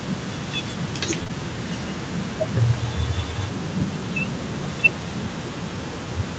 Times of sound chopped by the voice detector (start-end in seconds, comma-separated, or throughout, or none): none